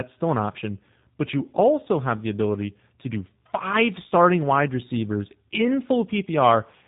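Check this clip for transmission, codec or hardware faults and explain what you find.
One fault runs through the whole clip. Throughout, the speech sounds rough, muffled and warbly, with nothing above 3.8 kHz. This is tandem speech coding: two speech codecs in a row, the second re-coding the first's damage, ending in what sounds like G.729A.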